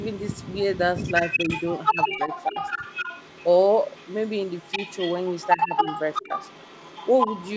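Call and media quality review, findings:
Echo leak: delayed copy of the speech, about 353 ms behind. Faint scraps at 0.0–0.58 s and 0.74–0.79 s, then nearly as loud as the talker from 0.96–3.5 s and 3.68 s to the end. Likely the far-end speakerphone's echo canceller letting its mic pickup back through.

Speech suppressed in double talk: talker dips while the echo runs over it, at 1.92–2.3 s, 2.5–2.56 s, 5.57–5.85 s and 6.25–6.31 s. Drops are around 10 dB, about 15 at the deepest. Likely the echo canceller can't separate the talker from the echo and ducks both.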